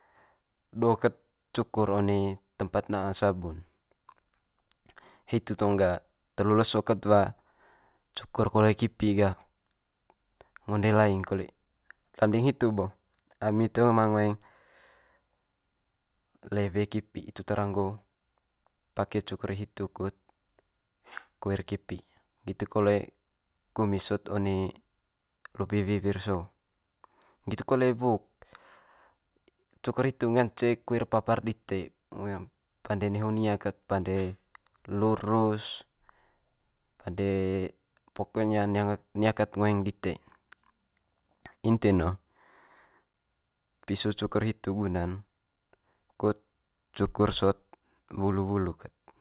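No technical faults can be heard in this speech recording. It has come through a working WebRTC call path, and nothing reaches above 4 kHz, which fits G.711 mu-law coding at telephone bandwidth.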